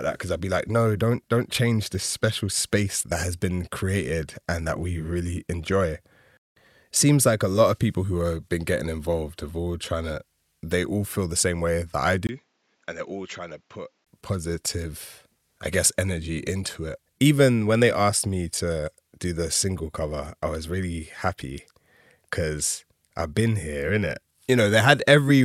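At 12.27 s, right after "same way that I", the speech drops about 10 dB and goes duller, with nothing above 7.6 kHz and a new noise floor roughly 40 dB down, after a 20 ms gap. It reads like the input likely switched to a poorer device, recovering at 14.07 s before "positive I guess energy".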